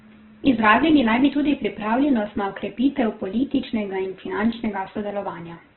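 From start to finish, the speech has likely been squeezed through Opus compression at a very low bitrate, in the region of 8 kbps. With so few bits, the encoder keeps each band's energy but refills the detail with folded copies of lower bands or with noise. Voiced sounds therefore come out rough and grainy, not clean. The bandwidth is also narrowed, leaving nothing above 4.2 kHz, so the audio is boxy and muffled.

Between 3.54 and 4.84 s, CD scratch ticks appear. A surface blemish corrupts more data on each revolution than error correction can repair. The player patches or mutes those samples, and each patch is heard as a sharp click or a tiny gap lasting only a few milliseconds. Eight such ticks land at a steady pace of roughly six per second, riding over the compressed speech.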